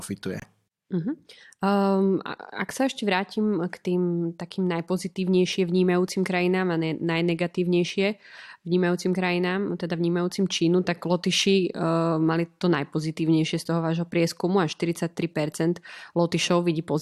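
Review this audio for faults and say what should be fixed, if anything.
A corrupt frame muted fault occurs at 0.40 to 0.44 s, near the start of the speech. The sound drops abruptly to silence for about 44 ms, a gap which fits a single lost compressed frame. Bit errors in that frame made the decoder reject it, and the player filled the slot with silence rather than audio, so the timing of what follows stays intact. Fix it by re-sourcing or re-encoding the segment from an undamaged copy. To prevent it, protect the compressed stream with checksums and error-correcting transport, and use packet-loss concealment so a rejected frame is interpolated rather than muted.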